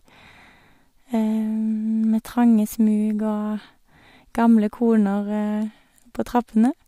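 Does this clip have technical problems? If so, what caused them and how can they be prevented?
No, nothing in this speech recording stood out as a technical problem on listening, so there is nothing here that needs preventing.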